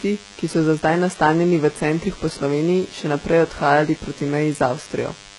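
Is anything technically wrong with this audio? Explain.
Yes, two faults run through the whole speech clip.

DECT cordless phone buzz: a nearby DECT handset or base fires a radio burst every 10 ms, and the audio circuitry rectifies it. The result is a thin, steady 100 Hz buzz rich in harmonics, roughly 25 dB below the speech.

HE-AAC compression: the treble is likely being rebuilt by spectral band replication at a very low bitrate, around 12 kbps. Heavy damage follows. Upper harmonics fail to align with the lower ones, s sounds turn gritty and lispy, and nothing exists above 11.1 kHz.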